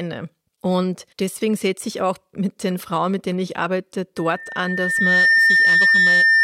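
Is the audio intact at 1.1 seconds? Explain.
Yes, the speech at 1.1 seconds plays through intact, with no dropout, click, distortion or other fault at that moment.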